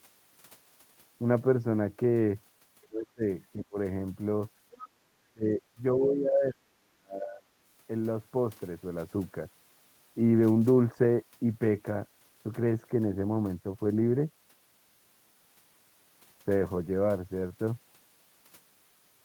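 At 2.82 to 2.87 s, an echo canceller that likely left some of the loudspeaker signal in the microphone lets the other side's voice leak through. The scrap is faint, around 35 dB below the speech. Right after, from 2.88 to 3.25 s, the canceller likely mistook both sides talking at once for echo and turned everything down. This is speech suppressed in double talk: the talker's level sinks by around 25 dB. A shorter dip follows from 3.54 to 3.76 s, about 20 dB deep. From 4.71 to 4.89 s, the other side's voice leaks through again, more audibly, about 20 dB below the speech, most likely because the echo canceller again failed to remove it fully. Then, from 5.07 to 5.52 s, double-talk suppression likely strikes once more, pulling the speech down by around 40 dB. From 5.73 to 7.48 s comes the longest stretch, likely the same suppression, which pulls the talker's voice down for well over a second with drops of around 35 dB.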